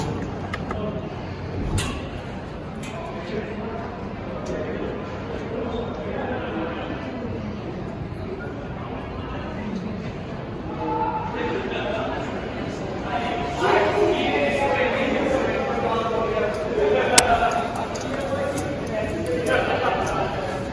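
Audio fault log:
17.18 s, file tags played as audio: a very short burst of very loud white noise with hard edges, gone almost as soon as it starts. A block of embedded metadata, here compressed data from a cover picture, has been read into the playback stream as if it were samples. Compressed image bytes look statistically random, so when they are treated as audio they become very loud broadband noise, heard as a sharp crack of static.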